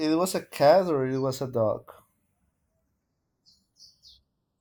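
From start to finish, the two channels of this speech are drifting apart. They sound like they were captured on devices running from separate clocks. One runs slightly fast, by something like 70 parts per million. The delay between left and right slides steadily, reaching a fraction of a millisecond, around 0.3 ms, by the end. Summed to mono, the comb-filter notches creep slowly through the spectrum. The result is a slow, sweeping flange on the speech.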